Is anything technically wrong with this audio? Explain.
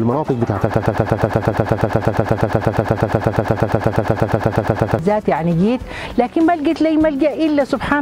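Yes. From 0.74 s to 4.99 s there is a broken-record loop: a fragment about 0.12 s long, roughly 119 ms, repeats exactly and back to back 36 times. The likely cause is a stalled player, encoder or stream that kept resending the last piece it held. The audio due in those four seconds is lost. The result is a rapid, machine-like stutter. On a waveform and spectrogram, identical blocks tile the span at a steady 0.12 s period.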